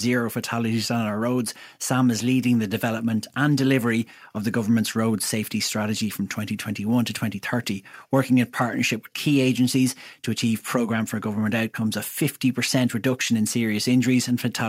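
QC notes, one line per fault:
No faults heard anywhere in this speech recording.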